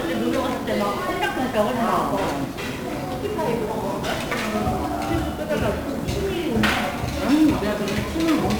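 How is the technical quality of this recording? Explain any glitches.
Technical quality is poor: the whole recording sounds fuzzy and crackly, with a dense hiss over everything and the treble swamped by noise. That is 1-bit DFPWM compression, present from start to finish. The codec keeps a single bit for every sample, nudging an adaptive level up or down to follow the waveform. The heavy, broadband quantisation noise this leaves sits over the entire sound, which fits a stream of around 48 kbps.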